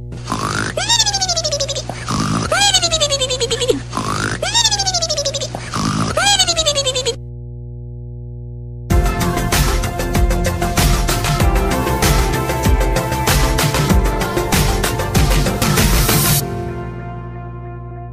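The audio carries mains hum from start to finish: a steady 60 Hz tone with low harmonics, only about 10 dB below the signal, from a ground loop or nearby transformer.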